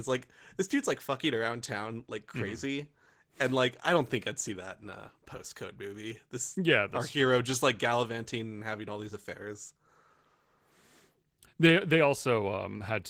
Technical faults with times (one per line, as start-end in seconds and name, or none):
0.00-13.10 Opus voice compression